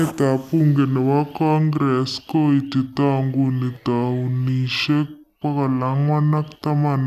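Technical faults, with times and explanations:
Throughout, wrong sample rate: the speech runs at two-thirds of its proper speed and sits about 7 semitones low, so it sounds slow, heavy and unnaturally deep. Speed and pitch drop together because the samples are read out more slowly than they were captured, with no rate conversion. A 0.667 ratio fits material recorded at 48 kHz being played back at 32 kHz.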